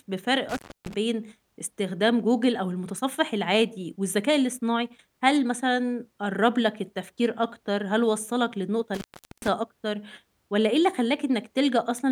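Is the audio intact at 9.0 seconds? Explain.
No. From 8.94 to 9.48 s the speech cuts out for 0.41 s with crackle and faint hiss, an intermittent contact from a loose connection briefly opening.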